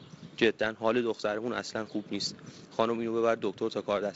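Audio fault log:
No faults found; the speech runs over a G.722 wideband telephone path at 48 kbit/s, with nothing above 7.7 kHz and only the light hiss and slightly coarser lower band that this coding rate leaves.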